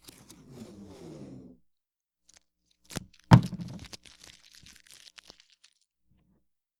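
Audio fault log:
No fault can be heard anywhere in these sounds. Nothing in the audio calls for an entry in this log.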